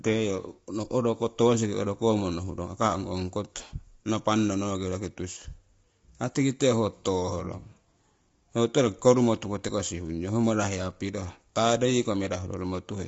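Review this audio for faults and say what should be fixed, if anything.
The speech sounds rough and grainy from start to finish. Noise fills the gaps between the pitch harmonics. Nothing is present above about 7.7 kHz. This is likely low-delay AAC compression, the AAC-ELD type used in video calls. Its short frames resolve the harmonics poorly and spend bits fast. The damage is plainly audible and points to a low bitrate, around 24 kbps. To prevent it, send the call at a higher bitrate or record locally without compression.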